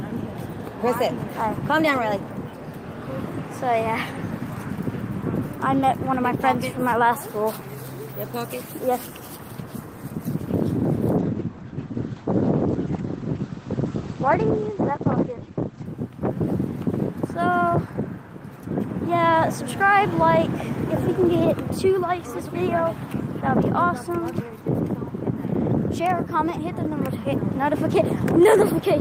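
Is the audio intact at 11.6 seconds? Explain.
No. A call bitrate drop from 11.18 to 15.91 s forces coarser coding, consistent with a fall from about 32 to 13 kbps. The audio turns muffled and watery, and a spectrogram shows content above 8 kHz abruptly missing.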